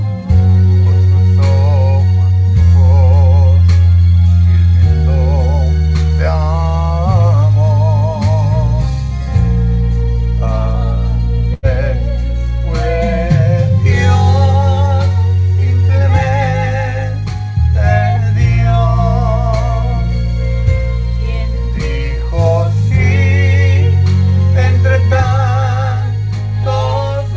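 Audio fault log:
11.54 to 11.66 s, burst of packet loss. A run of audio never arrived in time. The receiver stretched the last sound for about 88 ms, fading it into a buzz or hiss. About 90 ms of the original is skipped, so the sound jumps ahead.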